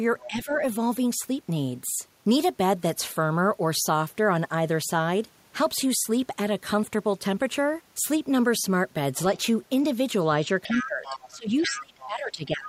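Other side's voice leaking through this speech recording appears at 0.19–0.27 s, 10.63–10.87 s, 11.03–11.35 s, 11.61–11.82 s, 11.98–12.05 s and 12.45–12.67 s, sitting roughly 10 to 20 dB under the main talker. This is likely far-end loudspeaker sound reaching the microphone and not fully cancelled. Speech suppressed in double talk follows at 0.27–0.62 s, with a dip of around 10 dB, and from 10.66 s to the end, with drops near 20 dB over about a second and a half. The likely cause is the echo canceller, unable to separate the talker from the overlapping echo, attenuating both.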